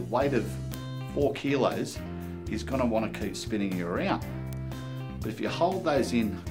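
At 0.74 s a bit error spike appears: a single sample jumps by a power of two and immediately returns, the signature of one bit flipped in memory or on a digital link. It sounds like one sharp, broadband tick unrelated to the surrounding sound. The same single-sample fault recurs at 1.91 s, 3.15 s and 4.53 s. The spikes reach about -8, -20, -20 and -14 dBFS respectively, so the first tick is the loudest.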